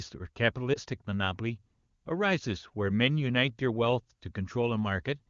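At 0.74 to 0.79 s, lost AMR speech frames: a radio error corrupted the data, so the AMR-WB decoder filled the gap by repeating its last good pitch and vocal-tract settings at lower gain. The result is a brief dip or warble, consistent with a single lost 20 ms frame.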